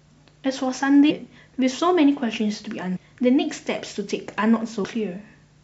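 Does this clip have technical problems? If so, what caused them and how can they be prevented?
Yes. Damaged data in a compressed stream causes short glitches at 1.07 to 1.11 s, 2.93 to 2.97 s and 4.83 s. Corrupted bytes make the decoder misread those frames. It loses sync and hunts for the next frame header. Verified transfers and checksummed storage prevent it.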